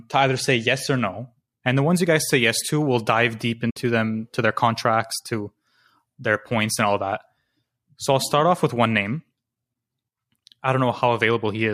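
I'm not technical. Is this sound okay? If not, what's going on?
No. AAC frame loss with muting at 3.70 to 3.77 s, after "to we'll dive deep": missing chunks of audio data became silence, leaving a soft-edged gap.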